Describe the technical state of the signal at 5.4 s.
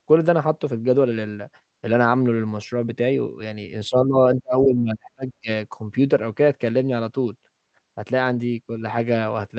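At 5.4 s the speech is in a suppression dip that reaches roughly 35 dB at its deepest, from 4.41 to 5.49 s, likely speech suppressed in double talk as the echo canceller ducks this side's talker along with the loudspeaker echo.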